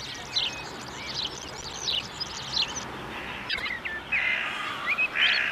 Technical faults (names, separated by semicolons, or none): processor overload crackle; frames out of order